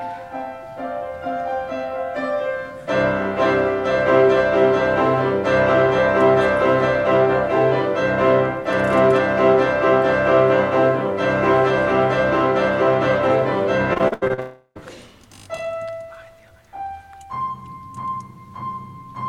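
From 13.93 to 14.40 s the sound turns choppy, the signature of repeated packet loss (robotic sound). Seven short holes arrive in quick succession, the longest about 79 ms, and each is patched by stretching the last received sound, so roughly half of this stretch is concealment rather than real audio. Unlike a single long dropout, the real sound keeps returning between the patches, which produces the stuttering texture.

The gaps then merge into one continuous hole from 14.40 to 14.77 s, where the audio likely dropped out over the network in a long network dropout. About 360 ms of sound is lost. The receiver carries the last fragment forward as a fading buzz or hiss, and it decays into silence for the final 60 ms or so. The sound then resumes without the missing portion. What separates this from the packet loss just before it is the single unbroken fade into silence, with no flickers of real sound in between.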